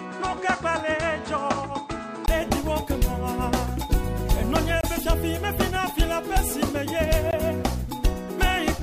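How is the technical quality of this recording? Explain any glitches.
Two kinds of trouble show up: a dull, narrower-sounding stretch at the very start, and two brief dropouts later on.

From the top until about 2.28 s, the sound is muffled and boxy. Nothing reaches above 9 kHz, there's a fresh layer of background noise roughly 40 dB under the signal, and the level sits around 5 dB lower. Then, after a short gap of about 20 ms, it suddenly opens up. That's most likely the input switched to a poorer device, a different mic or a headset's call mode, before it jumped back to the better one.

There are also two blocks of digital silence, one from 4.81 to 4.83 s (about 23 ms) and one at 7.31 s (about 19 ms). In each, the audio drops hard to silence and comes straight back with no fade, so each one comes across as a short hole. The 23 ms length fits a 1024-sample buffer the software didn't fill in time.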